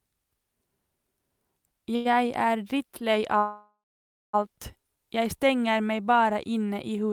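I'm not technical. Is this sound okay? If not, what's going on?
No. At about 1.95 s, just before "er drittlei alt jeg", the speech briefly sticks: a sound is held a little too long, for about a tenth of a second, with a slight buzz or dip. This is a short stall from a late packet. A piece of the call arrived late, so the receiving phone stretched the last bit of sound to cover the wait, then carried on from the same spot. Nothing is lost, but the speech lags slightly after it.

A bigger hiccup comes from 3.38 s to 4.35 s, between "er drittlei" and "alt jeg stenger meg". The speech stops, leaving a fading buzz or hiss and then silence for a bit over half a second, about one second in all, before resuming exactly where it left off. This is a call audio freeze, likely caused by a batch of the call's data being held up on its way. The phone filled the wait, so no speech is missing, but the talk after it runs about a second late.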